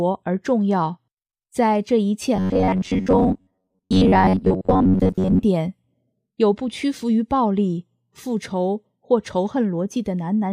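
From 2.36 to 5.43 s the sound turns into a rigid, metallic buzz locked at 93.8 Hz, a robotic sound from repeated short buffers. The likely cause is audio arriving too seldom, so roughly 10.7 ms chunks get replayed for most of that stretch while the real material is skipped.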